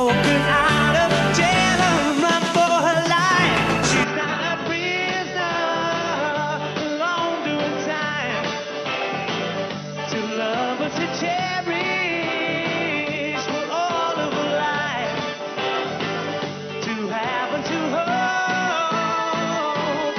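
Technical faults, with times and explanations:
4.04 s to 20.18 s, input switched to a poorer device: from 4.04 s the sound turns dull and boxy, with nothing above 6 kHz, and the level drops by around 5 dB. A faint new background noise appears, roughly 55 dB below the signal. There is no gap at the transition. The likely cause is the input moving mid-recording to a narrower-band microphone or headset profile, whose limited bandwidth, lower gain and own noise floor persist to the end.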